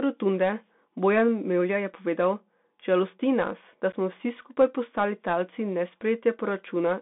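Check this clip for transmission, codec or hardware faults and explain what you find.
Two faults are audible in this speech clip.

The Bluetooth CVSD headset codec affects the whole clip. The sound is confined to roughly 200 Hz to 3.6 kHz, which fits a 64 kbps CVSD link. It codes one bit per sample, step up or step down. The damage is plainly audible: s sounds turn scratchy and a granular hiss runs underneath.

Unconcealed Bluetooth headset packet loss occurs between 3.92 and 3.95 s, after "nas da" and before "smo vsi skupaj postali". A few voice packets went missing, about 11.2 ms in total. Nothing filled the gap, so there is a brief hole with abrupt edges.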